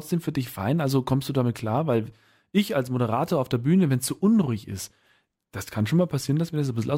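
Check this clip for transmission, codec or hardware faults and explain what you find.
I found no faults to explain in this clip.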